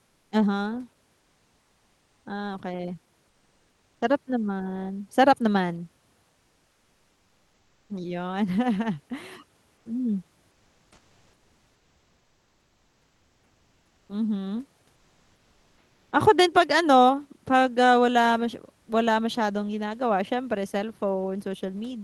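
Speech heard through a call codec, with comfort noise in place of the background during the pauses. This happens at 0.05–0.31, 1.19–2.25, 3.29–4.01, 6.29–7.89, 9.77–9.85, 10.51–14.09 and 14.95–16.11 s. In each gap, the real background gives way to a steady, featureless hiss. That background sits about 46 dB below the loudest speech. The hiss is up to about 5 dB quieter than it. The likely cause is Opus discontinuous transmission. The sender stops sending audio in pauses, and the receiver fills them with synthetic noise. The codec's upper limit sits near 12 kHz.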